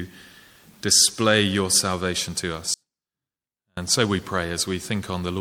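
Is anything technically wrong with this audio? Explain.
Yes. From 2.74 s to 3.77 s the sound abruptly drops away for about a second, leaving only a faint residue roughly 40 dB below normal before snapping back. This audio dropout to a faint residue likely comes from the signal path breaking while the downstream chain stayed live.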